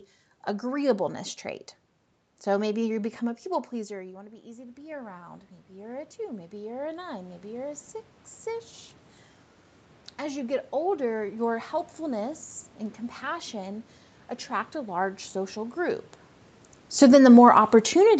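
At 2.98 s, just after "maybe you", the voice drops by about 16 dB as the talker moves back from the microphone around 3.5 s. Automatic gain rising follows: the gain control slowly adds about 12 dB through 8.75 s, so voice and room noise swell together.

From 16.87 s to the end, the talker moves again around 16 s, and automatic gain falling sets in. The control judges the input too loud, or its background noise too strong, and pulls its gain down gradually, so the sound starts loud and then sinks along with the background.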